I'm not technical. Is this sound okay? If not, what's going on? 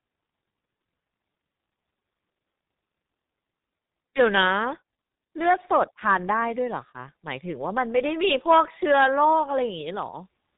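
No. All the way through, this speech has been squeezed by the G.723.1 codec, an old internet-phone system. Nothing above about 3.8 kHz survives, so it sounds muffled. Unlike plain muffling, the voice also turns hoarse and consonants smear together.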